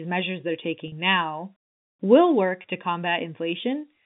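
At 0.88 to 0.92 s, and again at 2.62 to 2.64 s, packets went missing on the link. The receiver covered each hole by repeating the last pitch period of the speech. This is packet loss with pitch repetition. The 40 ms gap fits two 20 ms packets and the later 20 ms gap fits one. Both sound like a brief held, buzzy note before the speech resumes. The narrow telephone band of the G.711 coding can be heard throughout.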